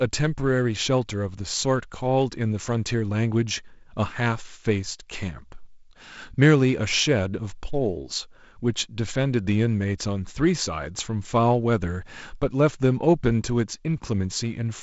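Nothing here counts as a fault: the speech comes over wideband G.722 telephone coding at what sounds like 48 kbit/s, with the usual top end stopping around 7.7 kHz.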